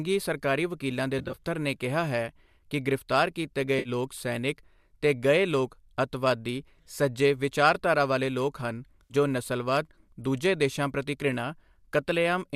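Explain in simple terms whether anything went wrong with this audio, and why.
Short bits of the sound went missing: AAC frame loss with concealment, at 1.19 to 1.38 s (several brief gaps), 3.79 to 3.89 s and 9.03 to 9.14 s. The decoder patched each gap by guessing, so you hear a smeared, hissy blur rather than silent dropouts. The speech was likely sent with low-delay AAC compression, as used in video calls.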